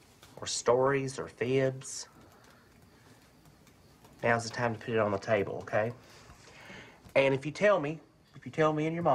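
From 0.31 s to 8.31 s there are periodic USB or driver dropouts. They recur every 2.0 s, about five in all. Each time, something briefly stalls the audio path. About half a millisecond of audio is skipped outright. Wherever there is signal, they sound like regular ticks.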